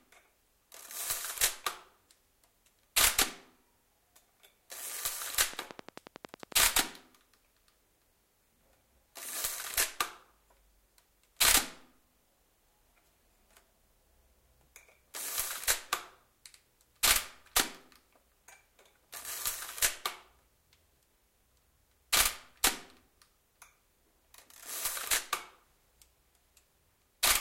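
From 5.54 to 6.53 s a train of clicks cuts through the sound: about ten identical pulses at a regular 11.1 per second, peaking roughly 10 dB above the sound. The likely cause is electrical interference. Their even spacing and matching shape set them apart from random crackle.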